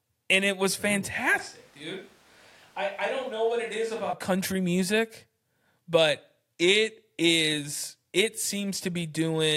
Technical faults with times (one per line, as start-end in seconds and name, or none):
1.39-4.13 switch to a distant microphone